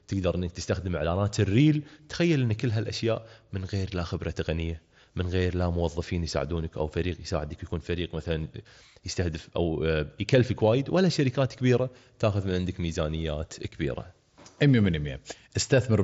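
A speech recording with no technical faults to report. It carries the sound of a Bluetooth headset link using the mSBC codec, with nothing above about 7.7 kHz and only light coding damage, which fits a stream of around 61 kbps.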